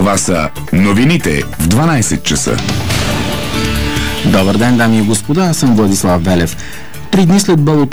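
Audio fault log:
No faults are detected anywhere in the clip.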